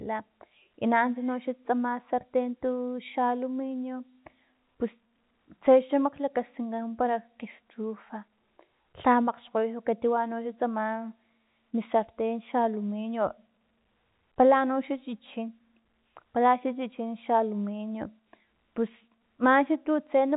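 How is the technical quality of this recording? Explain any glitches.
The technical quality is sound, and there are no glitches to explain in this telephone-band speech recording.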